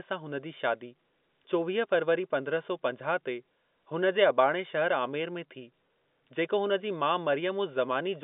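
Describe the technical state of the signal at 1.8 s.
At 1.8 s the signal is intact, carrying the speech through ordinary G.711 telephone coding with its usual narrow band that stops at about 3.7 kHz.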